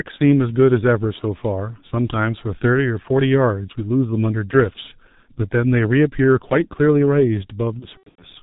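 G.723.1 codec compression runs throughout, heavily. The band stops at 4 kHz and the slow, coarse voice model leaves speech muffled and hoarse with smeared consonants, fitting roughly 6 kbit/s. VoIP packet loss concealed by the speech codec follows from 7.79 to 8.24 s. About 210 ms of audio is lost in gaps scattered over 420 ms, the longest run 90 ms. The decoder extends its last pitch and filter into a fading buzzy tone or coloured noise that stays weak after packets return.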